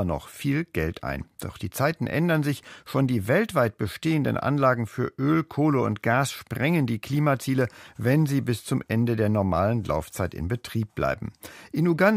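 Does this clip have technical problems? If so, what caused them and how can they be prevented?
No technical faults are audible.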